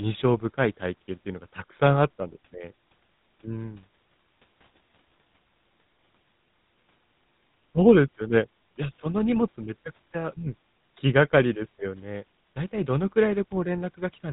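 From start to finish the speech carries plainly audible GSM full-rate codec damage, a buzzy, gravelly roughness. The coder rebuilds speech from coarse pulse excitation, which fits its 13 kbps rate. A spectrogram shows an empty band above 4 kHz and grainy, smeared harmonics.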